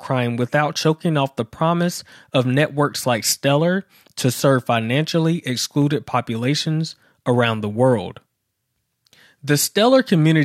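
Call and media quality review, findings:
Dropped samples, 5.82 s, after "to serve financially": single sharp click; waveform jumps a step, thin vertical spectrogram line. Likely buffer glitch skipping well under a millisecond.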